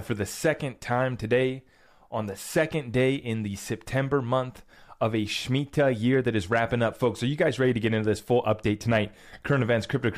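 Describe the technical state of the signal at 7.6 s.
At 7.6 s the speech signal is intact, with no audible fault at that moment.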